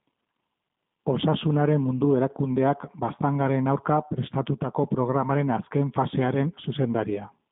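Throughout the speech, G.729 codec damage is plainly audible. Speech is rebuilt from a vocal-tract model and sparse pulses, sounding rough and synthetic, which fits an 8 kbit/s coder. A spectrogram shows a 150 Hz to 3.7 kHz band, empty above 3.8 kHz.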